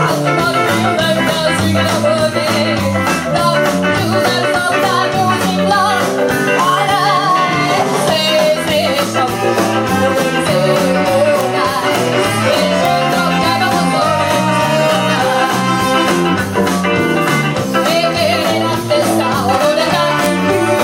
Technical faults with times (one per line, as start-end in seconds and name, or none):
11.41 integer overflow
11.96 integer overflow
12.85 integer overflow
20.25 integer overflow